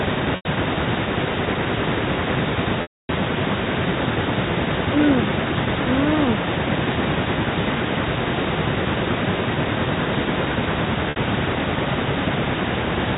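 Echo with no canceller runs through the whole clip. The far end's loudspeaker feeds its own microphone and nothing removes it, so every phrase returns roughly 300 ms later as a thinner copy about 9 dB below the speech.

Packet loss with pitch repetition strikes at 0.36 s (90 ms lost), 2.82 s (270 ms) and 11.1 s (60 ms). The receiver fills each gap by repeating the last pitch period. The two short losses sound like a briefly held, buzzy tone. The long one at 2.82 s fades to silence before the speech cross-fades back in.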